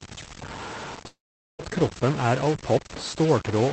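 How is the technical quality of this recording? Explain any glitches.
The quality is poor, with two faults on a speech recording that has passed through a call codec limiting the top end to about 8 kHz.

Stuck bit, throughout: one data bit is likely held at a fixed value by a faulty line or converter, pushing about half the samples off by that bit's weight. The speech carries added distortion, and the pauses fill with noise instead of going quiet.

Long network dropout, from 1.07 to 1.62 s: likely no packets reached the receiver for about 0.52 s. Concealment stretched the last sound into a fading buzz or hiss, leaving roughly 0.43 s of near silence. The speech then resumes with that stretch permanently missing.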